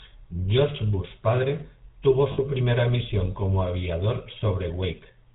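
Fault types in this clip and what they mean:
GSM full-rate codec: The whole recording has passed through the original GSM speech coder. It models the vocal tract as a filter and drives it with a sparse, regularly spaced pulse train, keeping only a fraction of the excitation detail. Nothing above 4 kHz survives, so the speech sounds narrow and dull. The damage is plainly audible throughout as a buzzy, gravelly roughness. The character points to the 13 kbit/s full-rate mode.
lost GSM frames: Around 2.32 to 2.39 s the coder lost some frames and filled the gap by reusing the parameters of the last good frame. The speech there turns into a brief, rough, metallic ring rather than dropping out cleanly. The gap lasts about 60 ms, which fits roughly three 20 ms frames. That is too short for the concealment to fade to silence.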